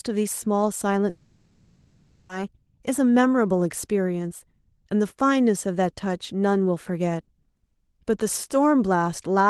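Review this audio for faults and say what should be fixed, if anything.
From 1.09 to 2.31 s the speech is replaced by a fading, buzzy continuation of the last sound, likely a long network dropout. About 1.2 s was concealed and never recovered. To prevent it, add redundancy such as Opus in-band FEC or retransmission, and address packet loss on the network path.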